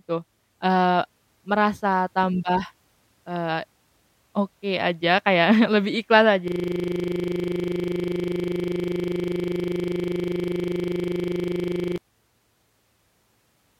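A system hang loop runs from 6.48 s to 11.98 s, right after "lebih ikhlas". The playback system froze while the audio hardware kept replaying the last contents of its buffer, so a single 40 ms slice of speech repeats exactly, well over a hundred times. At a loop rate of 25 Hz it becomes a coarse, rattling buzz that holds for about five and a half seconds before normal audio resumes.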